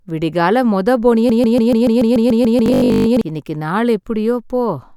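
Speech, with a broken-record loop from 1.30 to 3.21 s: a 144 ms fragment repeats exactly 13 times back to back, likely from a stalled stream resending its last buffer. Within that span, from 2.66 to 3.08 s, robotic sound from repeated short buffers gives a rigid 50 Hz buzz. Most of the audio there is recycled copies, which fits a 20 ms buffer that is likely being replayed because new data arrives too slowly.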